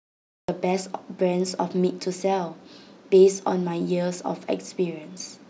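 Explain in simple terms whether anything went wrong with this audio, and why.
The recording started late, a cut-off start: after dead digital silence until 0.49 s, the speech bursts in mid-sound, with no natural beginning.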